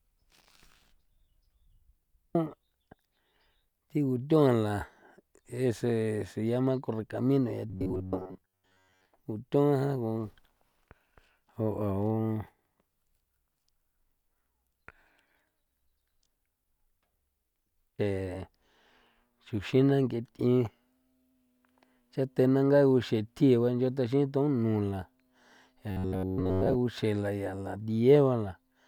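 At 7.70 to 9.05 s, and again at 25.91 to 26.77 s, the speech turns into a rigid, metallic buzz pitched at 93.8 Hz, still loosely tracking the words. This robotic sound from repeated short buffers likely comes from audio arriving too seldom, with most of each stretch filled by looping a slice of about 10.7 ms. A spectrogram shows evenly spaced harmonics of 93.8 Hz; the waveform shows identical short cycles repeating.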